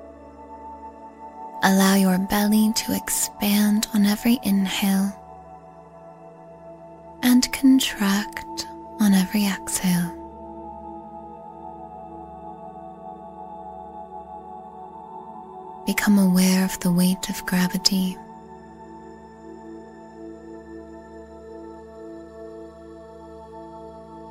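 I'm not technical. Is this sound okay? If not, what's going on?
Yes, this one's fine: nothing in it sounds broken, glitchy or out of place, so there's nothing to worry about.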